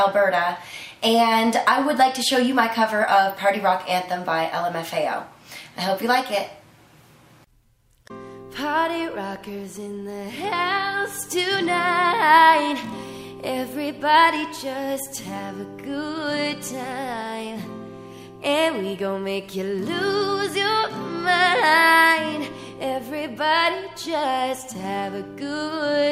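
Dropped samples show up twice, at 14.49 s and again at 16.84 s. Each is a single sharp click, seen as a thin vertical line across the whole spectrum. The likely cause is a handful of samples, a tiny fraction of a millisecond, missing from the stream. The waveform jumps straight to a later value and leaves a step. The gap is far too brief to remove any audible sound, so only the click remains.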